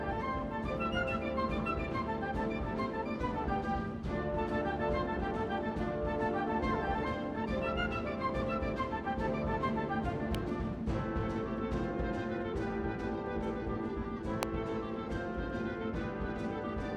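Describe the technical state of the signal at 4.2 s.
At 4.2 s the signal is intact, with no audible dropout, distortion or other technical fault at that moment.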